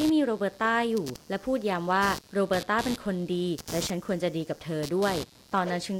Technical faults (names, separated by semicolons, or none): computer activity noise